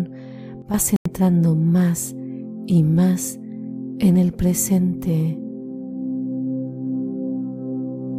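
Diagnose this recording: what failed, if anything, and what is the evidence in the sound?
Sudden gain jump at 0.62 s. Sound and background drop together by about 9 dB, then return at 0.74 s. This points to an unramped digital gain step, likely in processing.

Bluetooth stall at 0.96 s. The audio cuts to silence for about 92 ms and resumes by 1.07 s. Likely cause: playback over the wireless link, where delayed packets left the headphone buffer empty.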